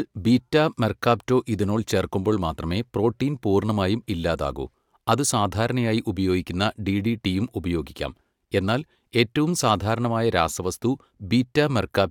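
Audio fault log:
Nothing stood out on listening to the speech.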